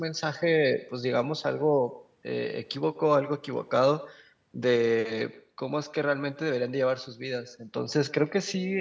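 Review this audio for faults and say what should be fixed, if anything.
Throughout the speech, every phrase is followed by a faint second copy. This is echo with no canceller. The far end plays the call through a loudspeaker, and its microphone picks that sound up again. Nothing removes it, so it returns after the network round trip. The delay is about a tenth of a second. The copy sits about 20 dB below the speech. It sounds thinner than the direct voice, within the call's band that stops at 8 kHz. To prevent it, enable acoustic echo cancellation at the far end, or have that side use a headset.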